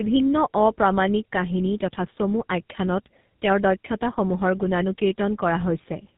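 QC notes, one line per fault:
Throughout: tandem speech coding. The speech seems to have been squeezed through two low-rate speech codecs in sequence, consistent with an AMR-NB stage at 7.95 kbit/s, then G.711, then GSM full rate. Each coder re-models audio already flattened by the one before, so their errors compound. The result is rougher, more muffled and more warbly than a single codec would leave, with nothing above 3.8 kHz.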